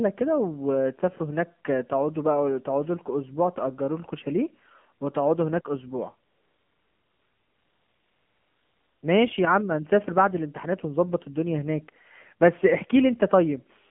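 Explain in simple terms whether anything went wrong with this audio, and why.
The speech went through the AMR narrowband mobile codec, the standard 2G and 3G phone codec. Everything above about 3.4 kHz is gone, so it sounds thin and muffled. The codec rebuilds the voice from a simple model of the throat and mouth. At this low data rate, that makes it plainly buzzy and synthetic.

From 6.30 to 9.02 s, there is AMR comfort noise. The phone decided nobody was talking and stopped sending speech for about 2.7 seconds. The receiving end filled that gap with smooth, steady made-up hiss in place of the real background, which switches in and out at those times.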